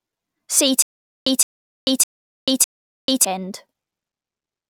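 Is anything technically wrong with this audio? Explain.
Yes. From 0.82 to 3.25 s, a stutter with silent gaps: a 165 ms fragment repeats four times between 440 ms silences, likely a stalled stream replaying its buffer.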